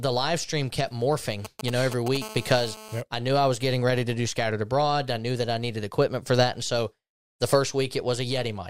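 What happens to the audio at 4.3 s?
Nothing goes wrong at 4.3 s; the speech carries straight through that moment with no dropout, click or distortion.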